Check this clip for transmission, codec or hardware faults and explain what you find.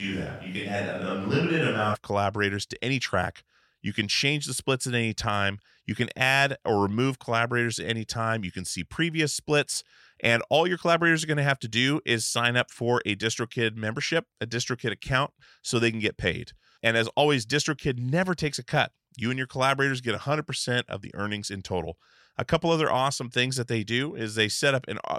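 One fault is present at the start. A switch to a distant microphone runs from 0 to 1.93 s, likely because the close microphone's signal was missing. The sound is hollow and roomy, with thinner bass and audible room noise about 30 dB below it, at roughly unchanged level, until the change back before "of collaborators to any".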